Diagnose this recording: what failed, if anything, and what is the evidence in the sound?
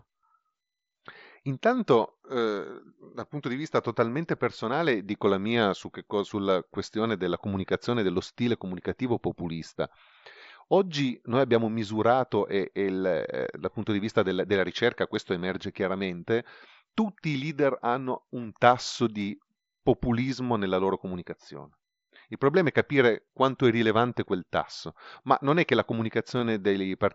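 The Bluetooth radio link dropped packets, a case of concealed Bluetooth headset packet loss. At 23.25–23.28 s, just before "quanto è rilevante quel", and at 26.39 s, after "non è che la", the receiver repeats recent waveform to fill the gap, leaving a brief buzzy patch.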